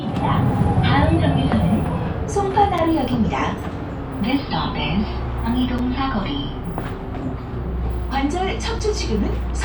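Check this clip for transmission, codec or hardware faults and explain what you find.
There is one fault, a gap between chunks, occurring three times. At 2.78, 5.78 and 8.79 s, the audio drops out for 6.5 ms, once every 3.0 s. Silence is inserted where successive 3-second blocks meet, so nothing is lost, but the flow breaks with hard edges, heard as short holes at regular intervals. A waveform shows flat near-silent slivers, and a spectrogram shows thin, evenly spaced blank vertical stripes.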